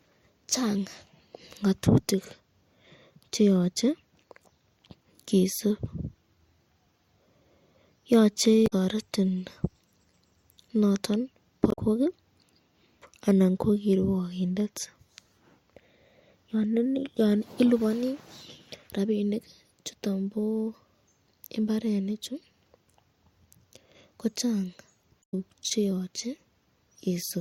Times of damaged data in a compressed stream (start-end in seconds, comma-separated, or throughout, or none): 8.63-8.73, 11.69-11.79, 25.20-25.34